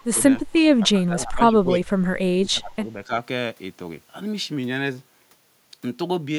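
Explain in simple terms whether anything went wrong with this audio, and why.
Yes, something went wrong. The speech dips sharply or drops out in short pieces at 0.03–0.18, 0.83–1.55, 1.72–1.97, 2.39–2.87 and 3.05–3.11 seconds. This is likely speech suppressed in double talk. An echo canceller mistook the voice for echo while both sides spoke at once, and turned it down.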